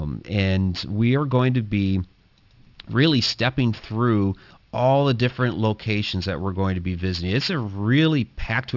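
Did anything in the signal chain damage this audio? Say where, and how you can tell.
Yes: sibilants sound gritty and metallic throughout, with energy pressed up to 6 kHz. This is aliasing from unfiltered downsampling, consistent with a 12 kHz rate.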